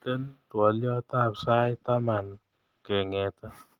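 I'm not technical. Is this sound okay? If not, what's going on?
No. From about 1.4 s to 2.99 s the speech turns rough and muffled, a little watery, and then clears up again. This is a call bitrate drop. The connection seemed to have less room for a moment, so the calling app squeezed the sound much harder to keep up. Squeezing it that hard throws away detail, and the crisp top end gets cut off. It stays at its worst for about one and a half seconds.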